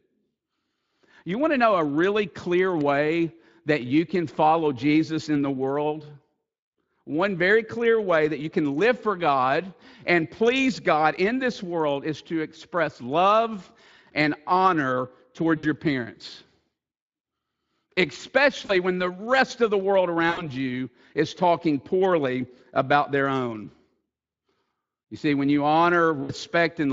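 Speech carried over a VoIP link shows VoIP packet loss concealed by the speech codec. It happens four times: 15.57 to 15.65 s, between "express love and honor" and "your parents"; 18.65 to 18.72 s, just before "when the rest of"; 20.29 to 20.49 s, between "rest of the world" and "you is talking poorly"; and 26.23 to 26.32 s. The gaps sound like about 60, 40, 80 and 60 ms of lost audio, which fits runs of 20 ms frames. The decoder fills each gap by repeating its last pitch and filter at falling gain. The sound stretches into a fading buzz or coloured noise. Because each frame builds on the previous one, the voice stays weak or distorted briefly after audio resumes. The Speex coding leaves light, noise-like roughness.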